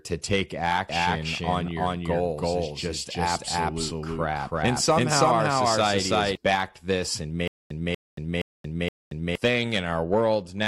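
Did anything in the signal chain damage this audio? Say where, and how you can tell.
Yes. From 0.89 s to 6.35 s there is a doubled audio track. A full-band copy trails by roughly 300 ms, at about the same level as the original. It has no decay or room colour. The likely stage is capture or editing, where a second, slower path adds an out-of-step copy.

From 7.48 s to 9.35 s there is a stutter with silent gaps. A 241 ms burst returns every 470 ms, with 228 ms of digital silence between each return. This points to a playback or stream buffer that likely stalled and replayed its last fragment. The audio that should have filled that time is lost.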